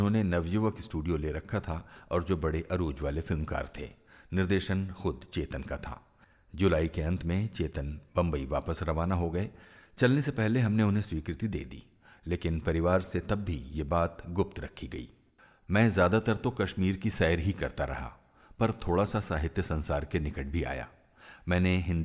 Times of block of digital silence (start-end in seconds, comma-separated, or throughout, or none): none